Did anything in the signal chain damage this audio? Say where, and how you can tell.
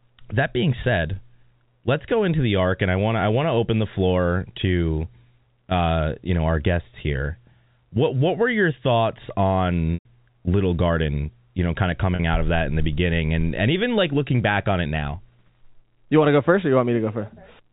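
Yes, network packet loss with pitch repetition at 9.94–10.05 s and 12.15–12.19 s (after "know kind of"). The receiver repeats the last pitch period over each gap, heard as a brief buzzy hold at 12.15 s, while the longer gap at 9.94 s fades into silence before the speech returns.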